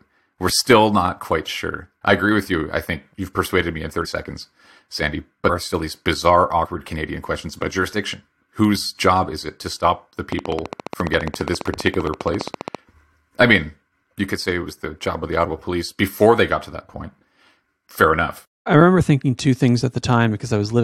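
At 4.04 s, 5.48 s and 6.64 s the speech jumps forward as compressed frames are skipped: missing or rejected blocks leave gaps of about 50 ms, about 150 ms and about 50 ms, consistent with whole 23.2 ms frames dropping out.

From 10.32 s to 12.76 s a train of clicks ticks steadily at 14.9 per second, around forty in all, peaking roughly 10 dB above the speech. Their near-identical shape and regular spacing, heard through pauses too, point to likely interference or a faulty connection, not decoder gaps.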